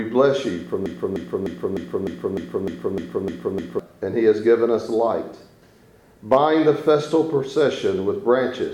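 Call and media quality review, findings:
Broken-record loop, 0.86–3.79 s. Identical 0.30 s fragment repeats back to back ten times with abrupt restarts. Likely a stalled player or stream buffer resending its last held chunk; the audio due in that span is lost.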